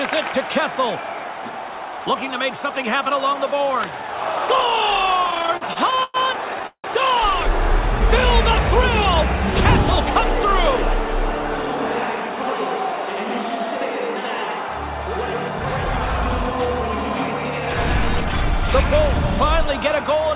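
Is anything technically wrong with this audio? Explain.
Yes, there are three timing faults, all heard through a band-limited call sound with nothing above 4 kHz, which fits a G.711 mu-law path at 64 kbps.

From 5.24 to 6.17 s there are repeated stalls (stutter). The sound hitches 11 times, with about 270 ms of filled-in continuation in total and the longest hold at 108 ms, nearly a third of that stretch. Packets kept arriving late, so the jitter buffer drained over and over. Each time the receiver extended the last sound until data resumed. Nothing is lost, but the passage drags in a choppy way. What separates this from a single freeze is the cluster of short holds rather than one longer gap.

From 6.67 to 6.87 s there is a call audio freeze. The last sound is stretched and fades, then about 90 ms of silence follows before the audio picks up where it left off. About 172 ms is added in all. 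The likely cause is a single delayed burst of packets emptying the buffer. Unlike the stutter just before it, this is one isolated gap that decays to silence, not a series of brief repeats.

From 17.95 to 20.16 s there is a jitter buffer speed-up. The receiver had built up excess delay and trimmed it by cutting many tiny pitch-period slices, about 70 ms in total. Playback runs at 103% with unchanged pitch. This differs from a resampling speed change, which would also raise the pitch.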